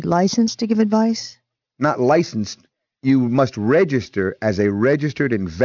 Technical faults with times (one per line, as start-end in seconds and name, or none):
0.00-5.64 aliasing